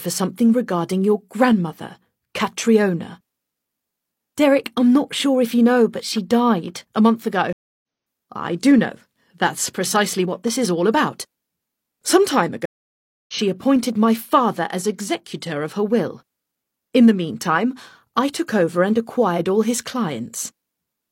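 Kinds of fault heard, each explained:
Clock drift buffer slips, 1.53 to 20.9 s: clicks recur every 2.38 s throughout the clip, about ten in all. The likely cause is two devices running on separate clocks that disagree by something like 70 parts per million, so the buffer between them slowly drifts until a tiny block of samples, on the order of seven, is dropped or repeated. Each slip breaks the waveform briefly and is heard as a tick.
Stream reconnect, 7.53 to 7.83 s and 12.66 to 13.34 s: the audio goes silent for 0.3 s and then 0.63 s. Each time it comes back at a later point rather than where it stopped, skipping roughly 0.2 s and 0.4 s of material. This is the sound of a dropped connection: the player waits, reconnects, and starts a new decoder partway into the live stream, so the content that passed during the gap is lost.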